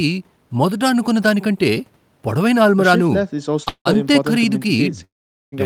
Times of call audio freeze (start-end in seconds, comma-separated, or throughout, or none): 3.68-3.87, 5.04-5.54